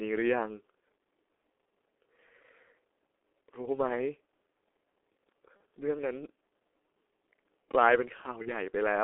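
From the start, the whole clip carries the sound of the G.723.1 codec. The speech is confined to a narrow telephone band of roughly 300 Hz to 3.4 kHz. The damage is heavy. Voices sound muffled and hoarse, and consonants smear together. This fits a low-rate coder of around 6.3 kbit/s. It works on 30 ms frames and tracks the voice only slowly, so quick changes in the speech get blurred.

At 5.57 s, a packet drops out. Its loss lasts about 30 ms, the length of one codec frame. The decoder fills the gap by repeating its last pitch and filter at a falling level. The result is a brief smear from 5.57 to 5.60 s.

At 8.42 s, a second VoIP packet loss, concealed by the speech codec, covers another 30 ms gap. Here the distortion persists longer, to 8.49 s. Each frame builds on the one before, so the speech stays weak and colored after packets resume.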